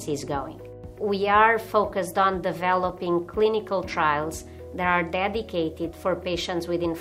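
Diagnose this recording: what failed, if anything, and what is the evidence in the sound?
Nothing failed; no stage shows any audible fault.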